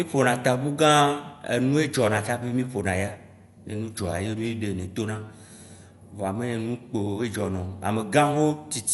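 From start to finish the speech sounds dull and boxed-in, with nothing above about 11.4 kHz, and a rough, fluttering grain clings to the voiced sounds. That points to Dolby Digital compression as the likely cause, at a low bitrate that fits roughly 64 kbps. Starved of bits, the encoder cuts the top of the band and leaves many frequency lines without detail, and the decoder fills those gaps with noise. That filled-in noise is the flutter heard around the tones.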